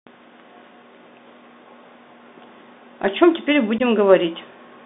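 Throughout, the speech carries a Bluetooth CVSD headset codec: each sample is sent as a single up-or-down bit at 64 kbps with an adapting step, so sibilants turn scratchy and a granular hiss sits underneath. A spectrogram shows energy confined between roughly 200 Hz and 3.7 kHz, with nothing above.

From 3.78 to 3.81 s there is unconcealed Bluetooth headset packet loss. About 15 ms of audio, likely a couple of lost link packets, is replaced by silence or an idle pattern, producing a brief hole with abrupt edges. The waveform shows a sudden gap, and the spectrogram shows a thin vertical blank.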